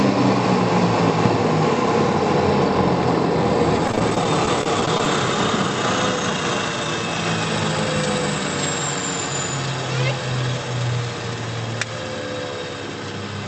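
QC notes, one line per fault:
3.87 to 5.07 s, repeated packet loss (robotic sound): more than a dozen brief holes, none longer than 19 ms, each patched by stretching the preceding sound, so about 13% of the stretch is synthetic fill. Unlike a single dropout, the rapid recurrence gives a choppy texture with pieces missing.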